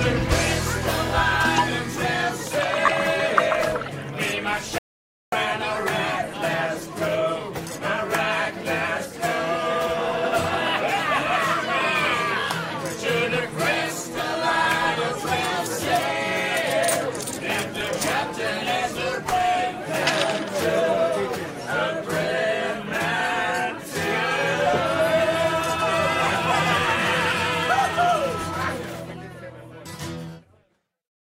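At 2.86 to 2.88 s, lost LE Audio frames cause about 15 ms of missing sound, which fits two lost 7.5 ms LC3 frames. The decoder covers the gap by repeating the last spectrum with scrambled signs, so tonal content briefly turns into a noisy smear.

From 4.78 to 5.32 s, an audio dropout to silence removes about 0.54 s. Input was likely lost while silence kept being written. The sound cuts off abruptly into silence with no room tone, then resumes mid-flow.

At 17.78 to 17.81 s, LE Audio frames are lost again, this time about 22.5 ms, consistent with three frames. The same concealment produces a slightly longer noisy smear in place of the original texture.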